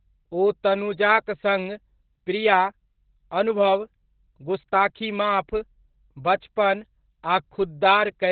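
From start to end, Opus voice compression at around 8 kbps leaves the speech muffled, hoarse and faintly robotic, with nothing above 4.5 kHz. That coarse, buzzy excitation sets it apart from a plain low-pass filter.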